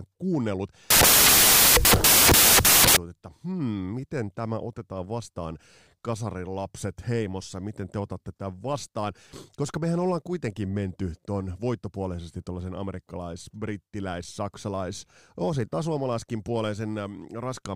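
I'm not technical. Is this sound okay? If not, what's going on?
No. From 0.90 to 2.97 s the speech turns into loud hiss: samples built from the wrong bytes, so tiny detail gets played as big, noisy jumps.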